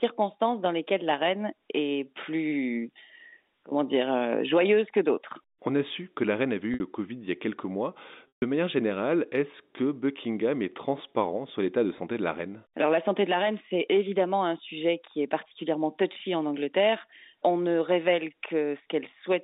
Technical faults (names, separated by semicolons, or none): packet loss with pitch repetition